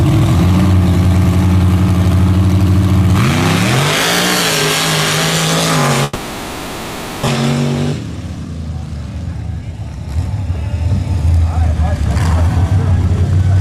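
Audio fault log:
6.03 to 7.29 s, long network dropout: The stream most likely stopped delivering audio for about a second, and the receiver bridged the gap by extending the last sound for roughly 1.24 s rather than falling silent. That fill is heard as a buzzy, hissy continuation that fades away. About 1 s of the original audio is simply gone when the sound resumes, and the later material arrives around a fifth of a second behind where it was.
8.17 to 10.17 s, jitter buffer speed-up: After the dropout the receiver's buffer held more audio than its target, so it trimmed repeatedly, removing short pitch-period-sized slices over these two seconds until roughly 200 ms of excess delay was gone. Because the cuts discard whole cycles instead of resampling, the pitch stays put while the playback rate climbs to 109 percent, giving a hurried feel across the passage.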